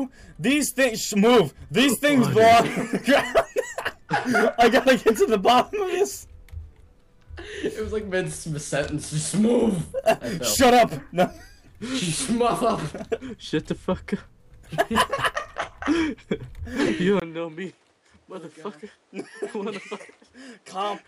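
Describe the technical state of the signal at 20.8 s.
At 20.8 s the signal is still on what is likely a poorer input device, a switch that begins at 17.20 s and runs to the end. After a 20 ms gap, the band stops near 11.4 kHz, the level falls by roughly 10 dB, and a new noise floor sits around 35 dB below, leaving the sound duller and boxier.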